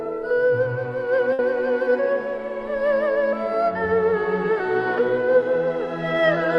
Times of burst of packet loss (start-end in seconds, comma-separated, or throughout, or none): 1.33-1.42